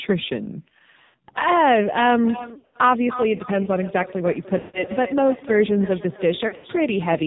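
Heavy AMR narrowband mobile codec damage runs through the whole speech clip. The 8 kHz sampled speech model rebuilds the voice from a pitch predictor and a few pulses per 5 ms. Nothing above 4 kHz survives, so the voice sounds muffled, buzzy and synthetic, which fits a low mode around 5.9 kbps. The call microphone high-pass filter's trimming of the deepest bass is normal, not a fault.

Lost AMR speech frames first hit at 1.04 to 1.15 s, about 100 ms. Frames failed their radio checksum, so the decoder repeated the last good pitch and vocal tract settings at falling gain. The sound smears, drawn out and fading, then returns weak or rough. The same happens at 2.54 to 2.77 s and 6.48 to 6.66 s, each as scattered losses with runs up to 80 ms. A solid 160 ms gap at 4.58 to 4.84 s fades toward silence.

Feedback echo between two devices starts at 2.23 s and lasts to the end. A second device on the call in the same room plays the speech back, and this microphone picks it up again. 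The echo canceller doesn't remove it because it only handles its own playback. Each phrase returns roughly a third of a second later, thinner and more ringing, at its loudest about 15 dB below the speech.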